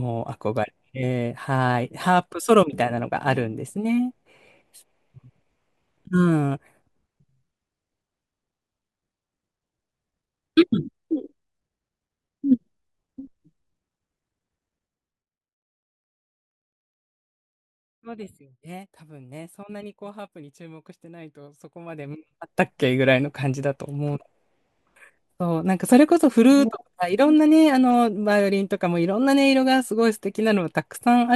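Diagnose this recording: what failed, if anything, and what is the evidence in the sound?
Ticking rides on the speech from 14.84 to 15.76 s as the level drops around 20 dB, and from 21.86 to 22.58 s as it rises: zipper noise from unsmoothed gain stepping 2 dB at a time, fifteen to twenty steps per second.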